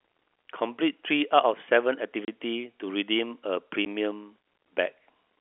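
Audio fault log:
2.25–2.28 s and 3.85 s, packet loss filled with silence. The speech drops out twice, for about 30 ms and then 10 ms. Lost packets were replaced with silence instead of being concealed. Both gaps are whole multiples of 10 ms, which fits three 10 ms packets and then one. The signal stops and restarts abruptly, so each hole has hard edges. The narrow telephone band on either side stays steady.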